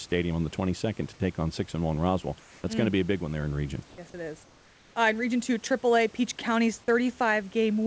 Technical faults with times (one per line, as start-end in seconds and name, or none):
2.40-2.64 comfort noise in place of the background
3.90-3.98 comfort noise in place of the background
4.44-4.96 comfort noise in place of the background